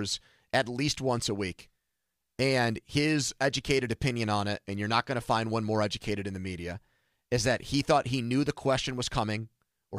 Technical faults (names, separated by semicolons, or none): none